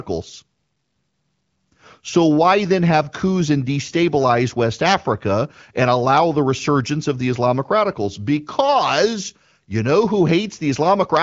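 Nothing stood out on listening to this recording.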